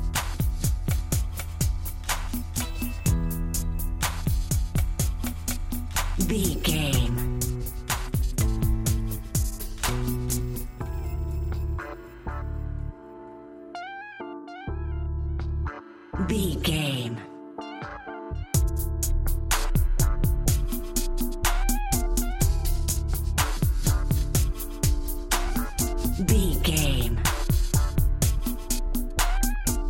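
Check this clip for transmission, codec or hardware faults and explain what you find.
One fault shows up, right at the end of the clip.

DAB burbling, 29.55 to 29.59 s: with weak reception, bit errors at around 0.2 percent slip past error correction and corrupt the MP2 audio data. Wrong samples put short blips of noise in individual sub-bands, giving a brief watery blip whose length fits two corrupted frames.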